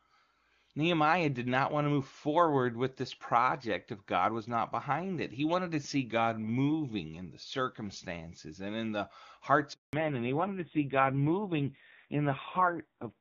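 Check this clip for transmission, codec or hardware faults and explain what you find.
Two faults are audible, starting at about 9.7 s and 9.9 s. Before that the speech comes through the AMR wideband (HD Voice) codec with little or no coding damage.

From 9.73 to 9.93 s there is a handover gap. The call switched networks and no speech frames arrived. The sound drops to silence for 200 ms.

From 9.93 s to the end comes a fallback to narrowband. Everything above 4 kHz disappears. The speech turns dull and rough, which fits a low-rate narrowband AMR mode around 5.9 kbit/s.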